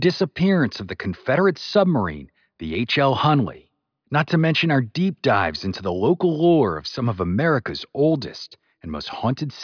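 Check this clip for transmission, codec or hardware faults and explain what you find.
Nothing turns up to flag here, as the speech runs along steady and unbroken the whole way with nothing worth pointing to.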